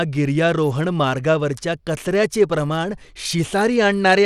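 Throughout the speech, the treble flickers and thins, and a gritty grain rides on the sound. A spectrogram shows a hard ceiling at 14.6 kHz with patchy, blinking upper bands. This is likely Bluetooth SBC compression starving its top sub-bands of bits, which fits a 96 kbps stream.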